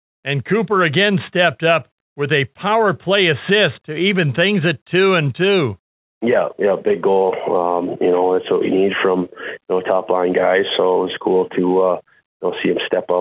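No technical faults can be heard anywhere in the recording. The audio has come through a WebRTC call path using the G.711 mu-law codec, which fits a 64 kbps telephone-grade link, and nothing is present above 4 kHz, giving it the narrow, band-limited quality of an ordinary phone line.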